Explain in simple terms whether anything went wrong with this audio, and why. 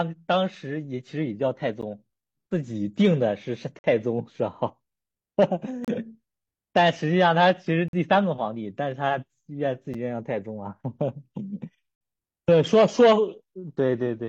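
Gaps between stream segments cut into this speech at 1.81, 3.79–3.84, 5.85–5.88, 7.88–7.93, 9.94 and 11.95–12.01 seconds, roughly every 2 seconds. Where two pieces of the stream failed to line up, the player filled the space with silence, leaving brief, sharp holes without losing any audio.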